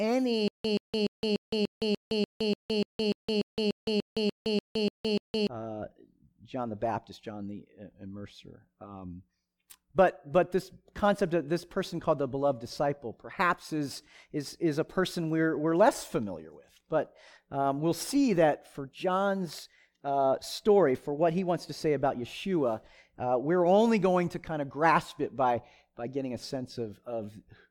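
A fragment of speech about 128 ms long repeats 17 times from 0.48 s to 5.47 s, each repeat followed by about 165 ms of dead digital silence, giving an even stutter every 294 ms. This stutter with silent gaps likely comes from a stalled player replaying its last buffer, so the speech due in that span is lost.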